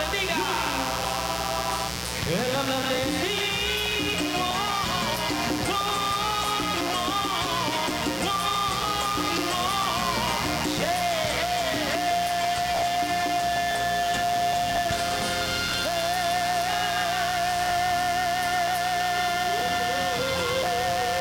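From start to finish a mains buzz sits under the sound, only about 10 dB below it. Sharp switching spikes on a 60 Hz supply leak in, and their harmonics climb into the kilohertz range, giving a raspy edge rather than the smooth low tone of plain hum.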